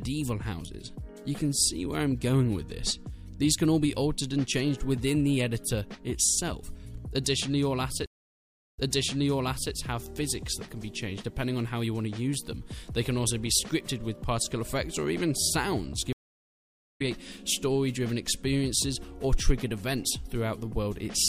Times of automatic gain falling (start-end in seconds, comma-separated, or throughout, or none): none